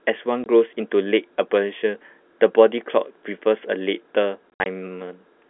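Packet loss filled with silence: the receiver substituted silence for missing audio from 0.44 to 0.46 s, a 20 ms hole, and from 4.54 to 4.66 s, where 100 ms vanished in gaps up to 60 ms long. Speech cuts out abruptly at each gap.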